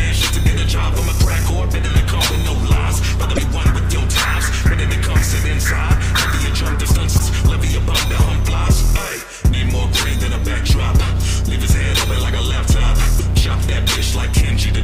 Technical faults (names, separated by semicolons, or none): damaged data in a compressed stream